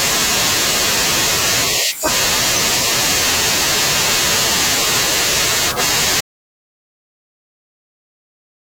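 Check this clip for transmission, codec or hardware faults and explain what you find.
There is one fault, an audio dropout to silence. At 6.21 s the speech cuts off mid-flow and the clip stays dead silent through to its end, about 2.4 s later. The gap holds no room tone or noise floor at all, just silence, so whatever was said after that point is lost. The likely cause is the input being lost, through a disconnected device, a failed link or a mute, while the recorder kept writing silence.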